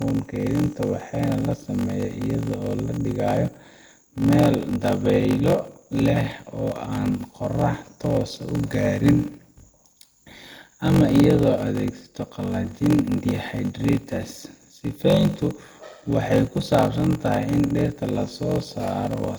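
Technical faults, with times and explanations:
throughout, block size mismatch (padded): The speech carries a steady buzz at 46.9 Hz and runs at 0.861 times normal speed, yet its pitch stays about where it should be. That combination points to one stage writing blocks shorter than the 1024 samples the next stage reads, with zeros filling the remainder, which fits a 48 kHz stream. Each zero gap recurs at the block rate, producing the buzz. A tape or clock slowdown would instead lower the pitch along with the tempo.
throughout, generation loss: The speech sounds swirly, smeared and hollow, with consonant attacks blurred. This is more damage than a single pass would leave, since content reaches up to 20.1 kHz, and the sound points to a chain of roughly three Opus encodes at around 64 kbit/s. The likely cause is repeated lossy decoding and re-encoding, with each pass quantising on a shifted frame grid so that noise and spectral holes pile up. 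A single low-bitrate encode would mainly lose bandwidth rather than smearing like this.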